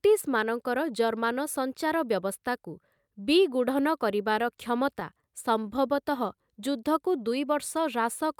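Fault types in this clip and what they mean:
Scattered short gaps: Between 4.58 and 5.24 s, packets arriving lost or too late left a few isolated holes, about four, each patched by extending the preceding sound rather than leaving silence. The filled material totals roughly 40 ms, the longest single patch around 15 ms, covering only a small share of that stretch. The speech stays clear, with brief ticks and smears where each patch sits.
Jitter buffer slow-down: From 5.63 to 6.37 s the receiver stretched playback to rebuild its buffer reserve, repeating individual pitch periods and fragments of pauses in succession. This adds 40 ms across the span, so the speech runs at 96% of normal speed with pitch unchanged. The effect is drawn-out syllables and a faintly sluggish delivery over that section.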